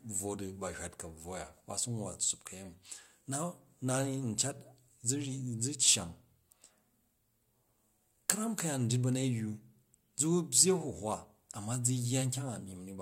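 A speech recording with nothing technically wrong with it.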